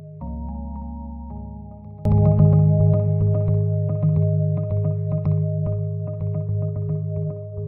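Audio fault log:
0.00–2.05 s, one channel inverted: music drops about 24 dB, nearly vanishing, likely reversed polarity cancelling in mono; waveform shrunken, spectrogram faint overall.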